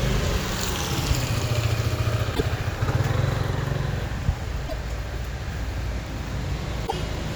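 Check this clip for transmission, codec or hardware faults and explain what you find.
There are faults: three bursts of damaged data in a compressed stream, at 2.31 to 2.41 s, 4.64 to 4.73 s and 6.83 to 6.93 s. In each, a short run of the encoded stream reached the decoder corrupted. The decoder misread those frames, lost its place and had to hunt for the next valid frame header before it could resume. Each fault is heard as a brief chirp or blip about 0.1 s long that breaks into the sound.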